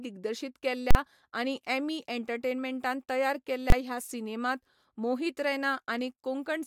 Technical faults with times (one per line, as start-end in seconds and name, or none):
0.91-0.95 invalid numbers at full scale
3.70-3.72 invalid numbers at full scale